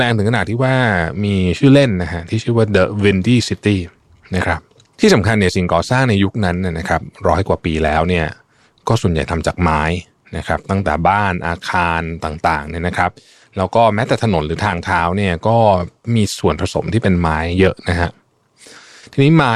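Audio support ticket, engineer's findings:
Dropped buffer (overrun), 7.88 s. Speech skips ahead at a single point with no gap of silence, just a splice where the two sides meet. Around 10 ms of audio missing. Likely capture-side overrun: the application failed to read the input buffer before the hardware overwrote it, losing that block.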